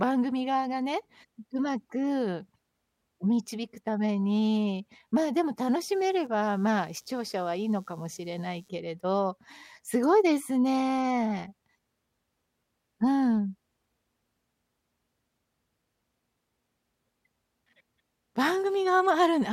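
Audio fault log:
5.60–8.69 s, computer activity noise: a load change in the computer shifted the ground shared with the audio circuit, adding a buzzy, chirping pulse at roughly 100 Hz under the speech, about 40 dB below it, tracking the machine's activity rather than the sound.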